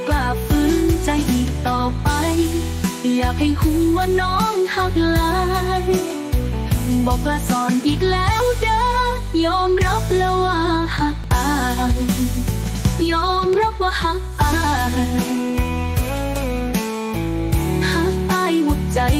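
Small forward jumps at 4.9, 8.4, 11.24 and 12.64 s, likely dropped buffers (overrun), each skipping roughly 20 ms, the third nearer 70 ms.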